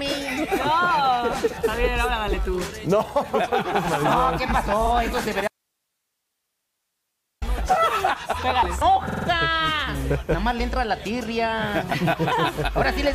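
At 4.86 s a 46 ms block of repeated frames plays twice, a short stutter that fits a pair of compressed frames being sent again. On a waveform the same short shape repeats side by side.

From 5.48 to 7.42 s an audio dropout to a faint residue removes nearly two seconds of sound. It cuts off abruptly and returns just as abruptly. The likely cause is a lost signal feed while the path after it stayed live, because only hiss remains, roughly 55 dB down. The waveform drops to a flat, fuzzy band. The spectrogram becomes a dim, even wash with no structure, and both edges are sharp.

At 9.08 to 9.27 s a 46 ms block is repeated four more times, a longer machine-gun stutter that adds about 0.19 s. A waveform shows five identical segments in a row.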